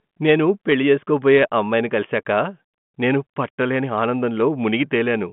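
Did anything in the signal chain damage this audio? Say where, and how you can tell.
No, nothing in the chain has hurt this one: it's telephone-band speech through G.726 ADPCM at 40 kbit/s, so the content sits roughly between 150 Hz and 3.4 kHz with nothing above about 3.8 kHz, and at that top rate any coding hiss riding on the speech is faint at most.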